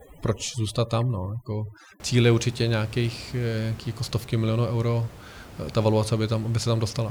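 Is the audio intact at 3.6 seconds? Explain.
Yes, the audio is intact at 3.6 seconds; the only background is the room noise picked up by the microphone, sitting about 19 dB below the speech, which belongs to the recording itself.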